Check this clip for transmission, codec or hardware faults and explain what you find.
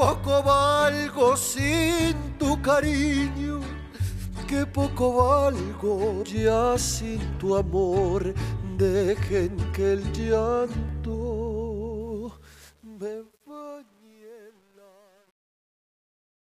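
One fault, and it's on the fade-out. From 12.01 s to the end, there's truncation distortion on a fade: the fade steps down without dither, which fits about 9-bit words, so from 13.0 s it gets gritty.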